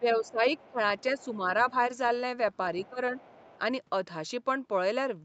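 A speech recording in which the talker's level dips sharply from 0.0 to 0.79 s, losing roughly 15 dB at its deepest over a few hundred milliseconds in total. A smaller dip of about 5 dB follows from 1.22 to 1.39 s, and another deep one of about 15 dB comes from 2.89 to 3.19 s. This is speech suppressed in double talk, likely caused by the echo canceller failing to tell the talker apart from the far-end echo while both were active, so it attenuated everything at once. Underneath, a faint second voice sits roughly 30 dB below the speech from 0.26 to 1.25 s and again from 2.78 to 3.59 s. That is the other side's voice leaking through, likely residual loudspeaker echo the canceller left in the microphone signal, and it overlaps the suppressed stretches. The call path's band limit, with nothing above 8 kHz, is also audible as a lack of top end.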